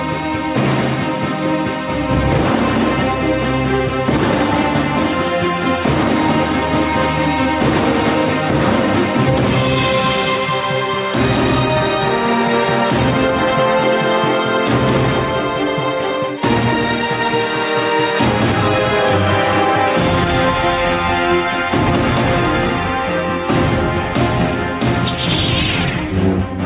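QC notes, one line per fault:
Throughout, gain pumping. The level swings by around 10 dB. Loud and quiet passages sit unnaturally close in level, so the sound feels squashed. The likely cause is input gain set far too high, with a fast limiter or compressor clamping down on each peak and releasing afterwards. The band stops at 4 kHz, which points to a narrowband call codec such as G.711.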